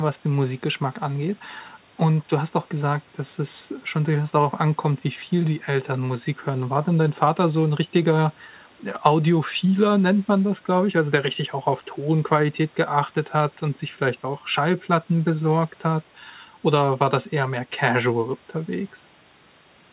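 Nothing stood out on listening to this speech, which comes through a call path with nothing above 4 kHz, as fits a narrowband G.711 mu-law connection.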